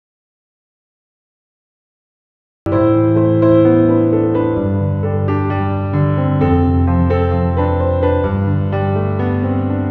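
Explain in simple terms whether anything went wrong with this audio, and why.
The clip opens in dead silence, with no background hiss at all, until sound starts abruptly at 2.66 s. This is an audio dropout to silence, likely a lost input while recording continued.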